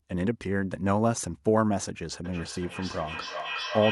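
Feedback echo between two devices runs from 2.24 s to the end of this speech clip, repeating roughly every 0.4 s and peaking about 6 dB below the speech. A second device on the call replays the audio into this microphone, outside the reach of its echo canceller.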